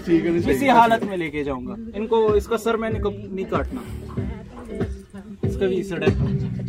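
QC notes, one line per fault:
No audible faults found on this clip; nothing to log.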